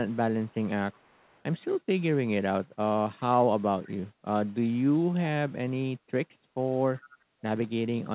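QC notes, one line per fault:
0.45–0.55 s, 0.92–1.43 s and 6.97–7.17 s: echo leak. A delayed copy of the speech returns 369 ms late. It is very faint early on and louder near 7.0 s, roughly 25 dB down. The likely cause is a far-end echo canceller passing loudspeaker pickup back.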